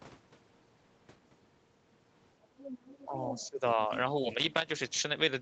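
Other side's voice leaking through appears in this speech at 2.58 to 3.06 s and again at 3.24 to 3.47 s, about 15 dB and then about 10 dB below the talker, likely because the echo canceller left loudspeaker playback in the microphone. Speech suppressed in double talk follows at 3.05 to 3.14 s with a dip of about 5 dB, then at 3.3 to 3.9 s with about 15 dB, likely because the canceller could not separate talker from echo and turned both down. Loose connector crackle bursts irregularly from 4.35 to 4.72 s, likely a worn or dirty contact chopping the signal as it makes and breaks.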